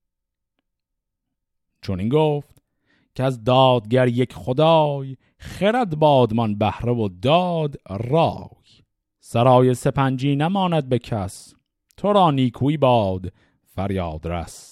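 No audible technical faults turn up anywhere in this recording.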